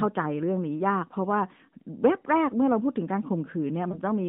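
A brief dip or warble at 3.92 to 3.99 s marks lost AMR speech frames. It fits a single 20 ms narrowband frame concealed by repeating the last good settings.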